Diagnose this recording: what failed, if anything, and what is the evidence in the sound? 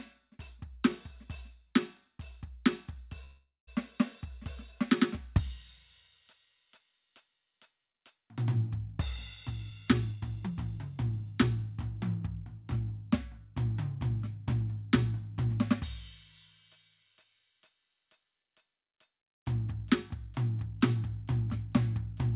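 Call processing over the network: a call audio freeze runs from 3.24 to 3.69 s. The last sound is stretched into a fading buzz or hiss, then about 170 ms of silence, before the music resumes where it stopped. The likely cause is delayed packets draining the jitter buffer, inserting a 431 ms gap with nothing lost.

Jitter buffer: a jitter buffer speed-up runs from 9.51 to 11.77 s. The music plays at 117% speed with its pitch unchanged, so the tempo audibly rushes. The receiver shed excess buffered delay by repeatedly cutting short pitch-period pieces, removing roughly 0.4 s in total.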